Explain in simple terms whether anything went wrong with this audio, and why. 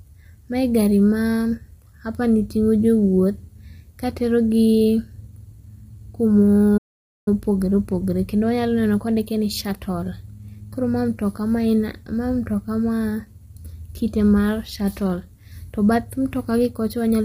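The speech was likely squeezed through low-delay AAC compression, the kind used for video calls, which works on very short slices of sound and has few bits to spare. Throughout the clip the voice comes out rough and grainy, with a hiss between its tones and a dull or artificial-sounding top end.

There is also a playback stall: the player likely ran out of audio data or got held up, so nothing came out for about half a second, from 6.77 to 7.28 s. The speech simply cuts to silence mid-flow, then resumes.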